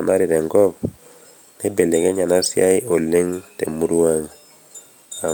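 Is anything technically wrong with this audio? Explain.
No, nothing in this speech recording stood out as a technical problem on listening.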